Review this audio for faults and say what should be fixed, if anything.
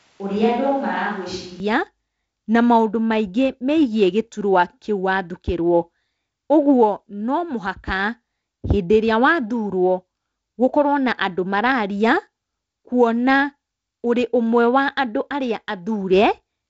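From 0 to 1.6 s the speech sounds hollow, roomy and bass-light, about 5 dB quieter, with room noise roughly 35 dB below it, then snaps back to close sound. This is likely a switch to a distant microphone. A plain gain dip would not add room tone or thin the low end. Monitor the close microphone's feed and confirm it is recording before the first line, so the far backup never carries the opening.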